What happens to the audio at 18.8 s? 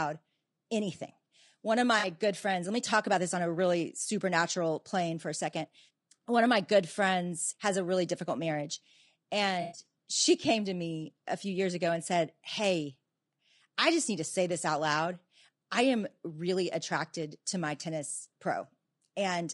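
At 18.8 s the speech sounds rough and grainy, with noise between the harmonics and a dull, synthetic-sounding top, as it does throughout. That's likely low-delay AAC compression: short frames starved of bits, consistent with a low bitrate.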